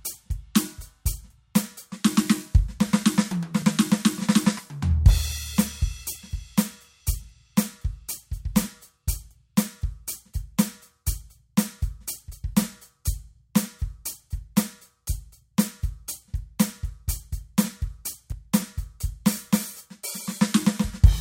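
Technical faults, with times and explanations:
18.32 s, dropped buffer (overrun): the music jumps forward, likely because samples weren't read before the hardware overwrote them, so roughly 20 ms is missing. The waveform shows an abrupt discontinuity with no gap, and the spectrogram shows a thin vertical broadband line.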